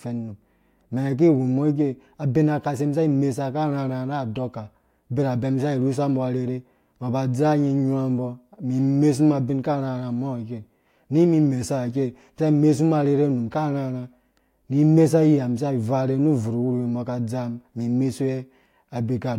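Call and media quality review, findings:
Sample clock jitter, whole clip. Faint hiss and roughness riding on the speech, strongest on loud and bright sounds (sibilants especially), gone in the pauses. Probable component: the converter's clock. Timing wobble somewhere under a microsecond, error sitting around 55 dB below the signal. Tracks waveform slope, hence the high-frequency bias.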